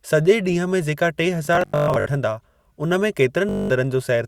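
A buzzing, machine-gun stutter breaks up the speech from 1.45 to 2.06 s, with about 366 ms of audio lost in scattered gaps (the longest about 122 ms), and again from 3.49 to 3.70 s, losing about 203 ms. This is Bluetooth stutter: late or dropped packets made the receiver replay its last short slice, and the speech resumes further along.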